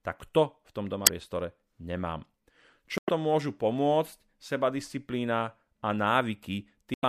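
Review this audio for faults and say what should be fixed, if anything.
Three short glitches break into the speech, at 1.03 to 1.09 s, 2.98 to 3.09 s and 6.94 to 7.04 s, each lasting roughly 60 to 110 ms. These are damaged data in a compressed stream: bytes in the encoded file were lost or overwritten, so the decoder misreads those frames, loses sync and scans for the next valid frame header before normal playback resumes. To prevent it, transfer and store the encoded audio with checksums or error-checked transport, and re-fetch or re-encode from the source when a file fails verification.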